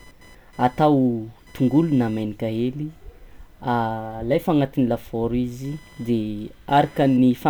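Throughout, a faint buzz near 1 kHz, about 35 dB under the speech, follows computer load: computer activity noise coupling in through the shared audio ground.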